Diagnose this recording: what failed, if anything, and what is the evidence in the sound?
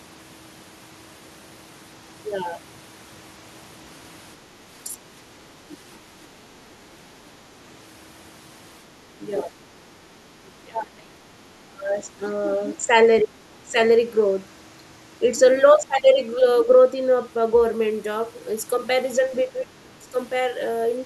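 The failure sits in call processing, with speech suppressed in double talk. The speech dips at 4.4 to 4.98 s, 9.18 to 9.29 s, 10.63 to 12.21 s, 13.23 to 13.76 s and 19.29 to 20.15 s. The shallowest drop is about 10 dB. The deepest reach about 25 dB, and the 10.63 s stretch holds down for well over a second. The likely cause is an echo canceller that could not tell the near talker from loudspeaker echo while both sides spoke, so it attenuated everything.

The other side's voice is also leaking through, from 5.71 to 5.77 s. It is a brief scrap, about 25 dB below the main speech and only tens of milliseconds long. The same call-processing stage is implicated. The far-end audio played from the device's loudspeaker likely reached the microphone, and the canceller left a small residue in the outgoing signal.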